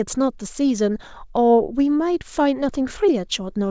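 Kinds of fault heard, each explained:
Nothing goes wrong in this bit of speech; it's simply come over a call link using a G.722-style codec, which is why there's nothing above 8 kHz.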